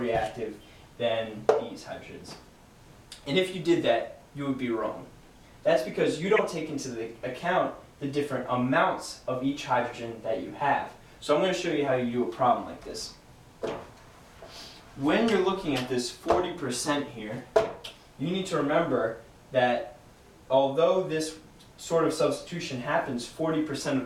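Two corrupt frames decoded, at 0.83 to 0.85 s (faint) and 6.36 to 6.39 s (loud), each a frame-length burst of misplaced energy, unlike a click.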